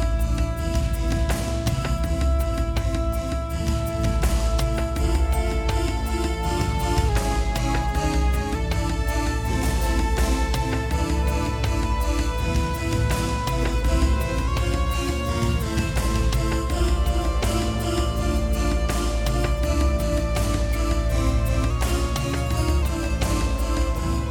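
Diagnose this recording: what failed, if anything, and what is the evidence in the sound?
Drift correction step, likely at the driver or buffer stage: sound slows 6.13% (about a semitone flat) from 7.09 to 8.55 s, then speeds 6.13% (a semitone sharp) from 14.47 to 15.62 s and 21.70 to 22.82 s, each snapping back. That is step-wise rate correction, not continuous wow.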